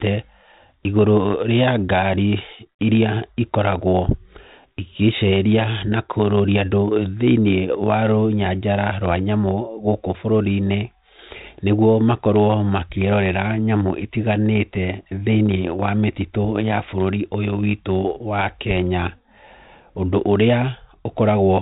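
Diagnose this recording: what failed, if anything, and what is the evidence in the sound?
Nothing failed here: the speech comes across a G.726 ADPCM link at 32 kbit/s, so the top end stops at about 3.9 kHz and there's a light coding texture on it, which is simply that telephone-band codec doing its ordinary job.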